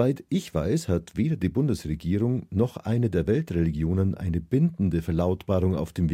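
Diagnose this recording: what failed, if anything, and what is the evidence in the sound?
The converter stage failed with sample clock jitter across the whole speech clip. An unsteady clock of around 2 microseconds times each sample slightly wrongly, adding a faint hiss about 45 dB below the signal that grows on loud, bright sounds. On a spectrogram, diffuse high-frequency noise tracks the speech energy and disappears in the pauses.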